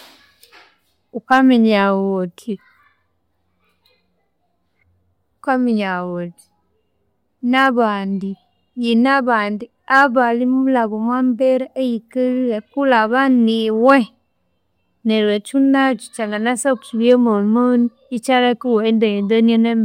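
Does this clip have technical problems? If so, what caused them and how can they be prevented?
Yes, there's brief hard clipping at 1.32 to 1.39 s, 7.57 to 7.67 s, 9.94 to 10.03 s (just before "abanimulha omwa mbere eyikalhire") and 13.89 to 13.92 s. Peaks overshoot the ceiling by about 1 to 3 dB, get squared off and crackle. Leave more headroom when setting the recording gain.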